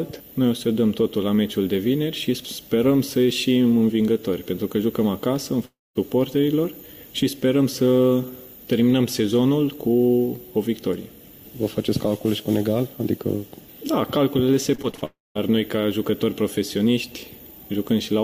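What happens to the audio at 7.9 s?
Nothing goes wrong at 7.9 s; the audio plays through that moment intact, with no audible fault.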